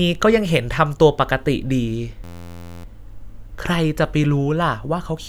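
From 2.24 to 2.84 s, a system hang loop repeats one 11.6 ms slice, which fits a 512-sample buffer, producing a steady 86 Hz buzz.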